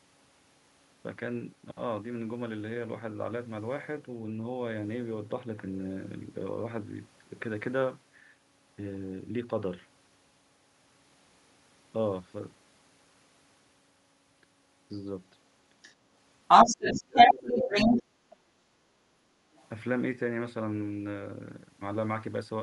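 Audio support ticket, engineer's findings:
Other side's voice leaking through, 15.82–15.95 s. Brief faint far-end scrap, about 20 dB under the talker. Likely loudspeaker echo left in the mic signal by incomplete echo-canceller subtraction.

Other side's voice leaking through, 16.48–18.0 s. Long far-end stretch, roughly 15 dB louder than the talker and dominating the mix. Same likely path: canceller failing to model the speaker-to-mic echo.

Other side's voice leaking through, 19.56–19.67 s. Very faint short scrap, around 30 dB down. Likely residual echo again.

Speech suppressed in double talk, 16.7–18.2 s. Talker dips and breaks up in pieces while the far end talks over them, deepest cuts around 30 dB, about a second affected in total. Likely the echo canceller, unable to separate local speech from loudspeaker echo, attenuating both.

Background gated by the echo canceller, 18.48–19.05 s. 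Room tone sags, deepest about 9 dB, for about half a second, then recovers. The echo-canceller suppressor clamped the mic down during loudspeaker playback and released afterwards.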